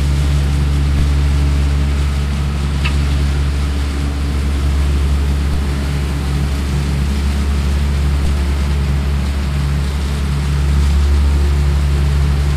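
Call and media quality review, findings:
DC step at 0.99 s, 5.54 s and 8.25 s: low thump at each, sound continues unchanged underneath. Zero line jumps by about -13, -13 and -12 dBFS, then decays as through a 5 Hz high-pass. Converter recalibration or offset input being switched in.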